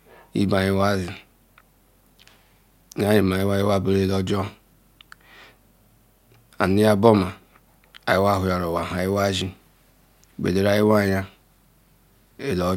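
Nothing in the speech recording points to a technical fault at any point.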